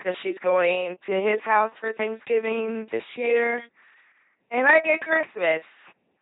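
The whole speech clip runs through an LPC-10 vocoder, with heavy damage, and it sounds like one that fits the 2.4 kbit/s military rate. Each moment is rebuilt as either buzz or hiss through a small filter, giving that mechanical robot voice, with nothing above 3.8 kHz.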